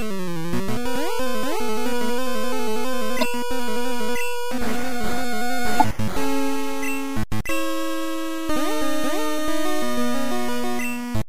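Two short bursts at 3.21–3.23 s and 5.80–5.82 s are corrupt frames decoded: bit errors in a couple of compressed frames made the decoder place energy at wrong frequencies, producing brief glitches peaking at about -10 dBFS and about -5 dBFS.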